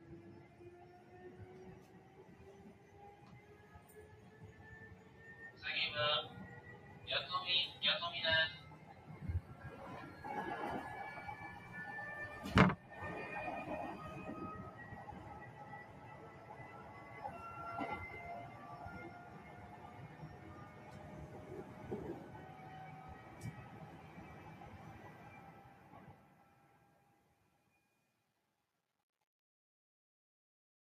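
A noise suppressor applied to music or sounds runs throughout. It mistakes sustained tones and tails for noise, pulling them down by around 10 dB, so the sound pumps and thins.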